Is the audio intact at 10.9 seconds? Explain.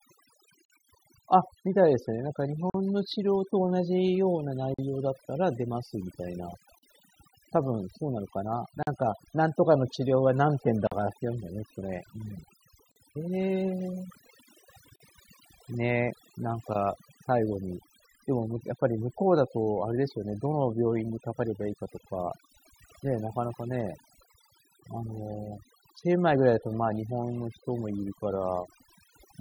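No. From 10.87 to 10.92 s there is a gap at a join of encoded pieces: a 43 ms silence with smeared abrupt edges, after which the sound resumes where it stopped. Separately encoded segments were joined untrimmed, so encoder start delay and last-frame padding remain. The gap recurs every 2.0 s.

Overdone noise removal also affects this moment, as it does the whole clip. Frequency bands near the noise estimate are pulled far down, taking quiet speech detail with them, so the background sits near silence with twinkling specks.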